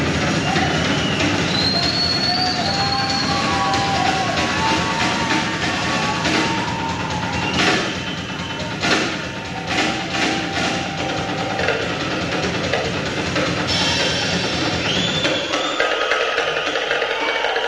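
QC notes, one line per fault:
No faults heard; nothing to log.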